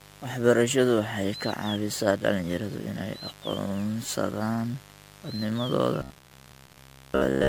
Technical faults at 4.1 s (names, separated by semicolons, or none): mains buzz; generation loss